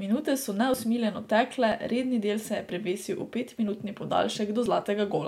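Audio missing between chunks occurs at 0.74, 1.72, 3.68 and 4.66 s, each a tiny jump where a sliver of about 20 ms of the speech drops out and the surrounding sound is butted together with no gap. The spacing of roughly one second points to a recorder or processor handling the audio in 1 s blocks and likely losing a brief piece each time it closes one block and starts the next.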